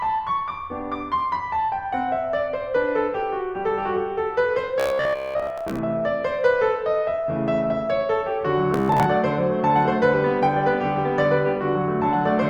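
From 4.80 to 5.82 s, the music collapses into a rigid, metallic buzz at about 67 Hz. This is robotic sound from repeated short buffers. The same fault returns from 8.74 to 9.06 s. New audio likely arrived too seldom, so a slice of roughly 15 ms was played over and over. Most of the real music was skipped. The repeats impose that fixed buzz pitch, and the music only loosely follows underneath it.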